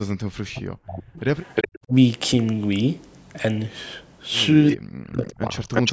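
From 0.39 to 1.21 s the speech drops by up to about 40 dB: speech suppressed in double talk, likely an echo canceller ducking the near talker while the far side speaks. Unlike echo, nothing is added; the voice itself dips. Further dips follow at 1.87 to 1.93 s (about 15 dB) and 4.96 to 5.68 s (about 40 dB). Between and after these, an echo leak returns a copy of the speech 357 ms late: from 1.42 to 1.79 s at about 5 dB below the speech, briefly at 4.70 to 4.77 s at about 20 dB below, and from 5.67 s to the end at about 5 dB below. Its fixed lag makes it a repeat of earlier sound rather than a level dip.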